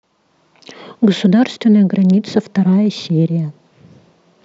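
No technical faults can be heard anywhere in the speech recording, which carries a steady, continuous signal with nothing in it that calls for correction.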